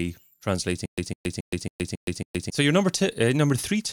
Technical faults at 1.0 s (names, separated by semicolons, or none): stutter with silent gaps